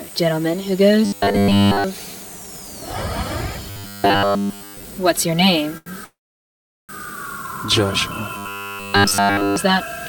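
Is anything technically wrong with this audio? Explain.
Yes, there are a few problems. Robotic sound from repeated short buffers shows up at 1.05–1.84 s, 3.70–4.83 s and 8.37–9.56 s: a rigid, metallic buzz at 100 Hz. That's likely one 10 ms buffer looped over and over while new audio arrives too slowly, so nearly everything you hear there is repeats.

There's also a short stall from a late packet at 5.77–5.88 s. The jitter buffer ran dry, so the last sound gets stretched for about 87 ms until the packet shows up, then playback resumes right where it stopped, with nothing lost.

Then a call audio freeze at 6.04–6.91 s. The audio hangs for about 847 ms, with roughly 760 ms of that as silence after the held sound fades. The cause is likely packets delayed in transit. Playback picks up exactly where it left off, so a gap gets inserted but nothing is missing.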